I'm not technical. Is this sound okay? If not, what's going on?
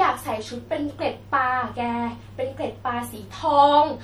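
No. The recording was likely squeezed too hard by MP3 compression, which saves space by throwing away the parts of the sound it judges least noticeable. Here it discarded too much. Throughout the speech, from start to finish, the quieter details flicker in and out so the sound turns watery and swirly, and s sounds pick up a metallic chirp while the starts of sounds blur.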